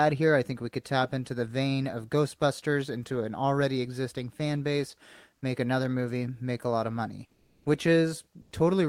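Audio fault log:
7.27–7.63 s, comfort noise in place of the background: For about 360 ms the real background, sitting about 38 dB below the loudest speech, gives way to a smooth, featureless hiss roughly 6 dB quieter. The sender likely stopped transmitting during the pause, in the style of Opus DTX, and the receiver filled the gap with synthetic noise. No speech is lost, only the room's texture, which sets it apart from a dropped sound.
8.41–8.47 s, sound dropped by the voice detector: Here about 60 ms is replaced by comfort noise, and roughly 30 ms of that was actual speech, so the sound is clipped rather than the background merely smoothed. The voice detector likely took part of the speech for silence and halted sending until it triggered again. The missing sound itself, not a change in background character, separates this from the comfort noise at 7.27 s.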